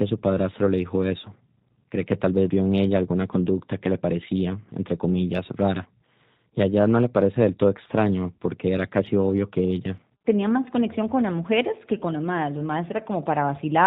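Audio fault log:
Throughout: G.729 codec. The speech sounds rough and faintly synthetic, rebuilt from a vocal tract filter, pitch predictor and sparse pulses, which fits an 8 kbit/s stream. A spectrogram shows nothing above 4 kHz, with smeared harmonics and a grainy, uneven noise floor.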